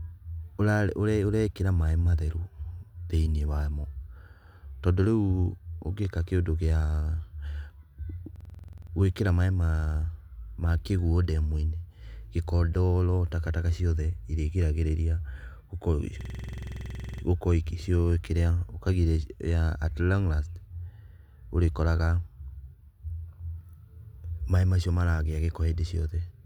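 A rapid machine-gun stutter at about 21.5 repeats per second hits the speech from 8.36 to 8.92 s and again from 16.21 to 17.23 s. This is a system hang loop: the driver froze while the hardware replayed one 46.44 ms buffer, which fits a 2048-sample size.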